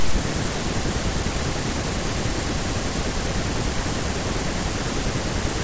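No technical faults can be heard anywhere in this recording.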